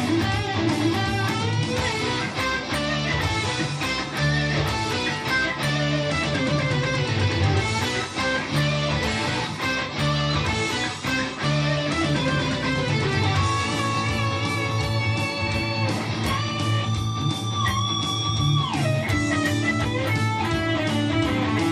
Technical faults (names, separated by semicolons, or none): none